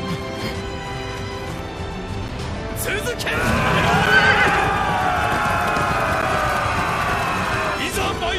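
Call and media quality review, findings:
Block of digital silence at 2.28 s, 4.06 s and 6.22 s. Gaps of about 8.7 ms, 7.3 ms and 10 ms. Heard as ticks. Probable component: playback path missing its output deadline. Samples zeroed abruptly, no fade.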